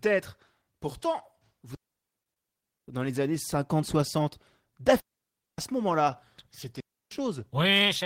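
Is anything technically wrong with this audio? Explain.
Yes, the speech has two kinds of fault.

Digital wireless dropouts occur at 1.75 to 2.88 s (a mute of about 1.08 s, ending just before "dans les années"), 5.00 to 5.58 s and 6.80 to 7.11 s. The receiver lost too much data and faded to near silence, leaving clean gaps with no noise burst on either side. The waveform flattens to a line, and the spectrogram shows blank vertical bands.

Short stalls from a late packet occur at 2.23 to 2.29 s and 2.34 to 2.39 s, inside the first gap. Each time the jitter buffer ran dry and the last sound was held, for 25 ms and then 24 ms, until the packet arrived. The result is a sound held too long. It appears as a short stretch of repeated waveform cycles and flat horizontal streaks on a spectrogram.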